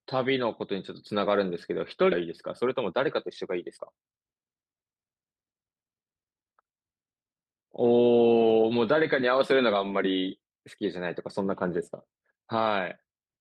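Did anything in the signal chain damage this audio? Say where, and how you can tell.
Yes. At the network receiver, a stretch of speech was dropped at 2.12 s, either on the way or by the jitter buffer, while later audio was already queued, a skip ahead. About half a second of speech never plays, and with no filler inserted the two sides butt together almost directly. You hear an abrupt forward jump in the speech with no pause or fade, as if a chunk were snipped out. The playout delay drops by about the same half second.

Right after, from 2.21 to 4.09 s, the jitter buffer performs a jitter buffer speed-up. Holding more audio than its target, it repeatedly trims short pieces of one or a few pitch periods to shrink the backlog, removing about a tenth of a second in total. The speech runs at about 106% speed with its pitch unchanged, so it sounds slightly hurried and clipped in rhythm while the voice stays at the same pitch.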